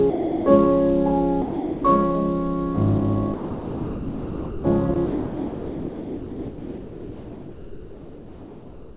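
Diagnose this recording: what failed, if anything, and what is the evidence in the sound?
Converter stage, sample clock jitter: a faint hiss rides the music throughout, roughly 30 dB down, getting rougher on loud, bright passages.

Call processing, sound dropped by the voice detector, likely: the music gives way to comfort noise at 0.1–0.46, 1.42–1.84, 3.34–4.64, 4.94 s, and from 5.06 s onward.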